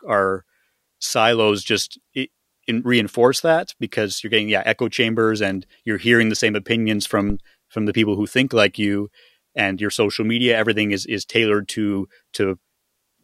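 Around 7.30 s a phantom power thump cuts into the speech: supply voltage switching on a live input sends a step through the coupling capacitors. You get a deep thud peaking about -11 dBFS and dying away within about 33 ms, all over by 7.45 s.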